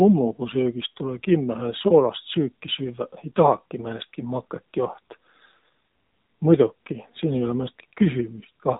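Throughout, the speech has passed through the AMR narrowband mobile codec, which discards everything above 4 kHz and rebuilds the voice from a vocal-tract model fed by sparse pulses. At a rate that points to about 7.4 kbps, the result is dull, plainly buzzy and synthetic.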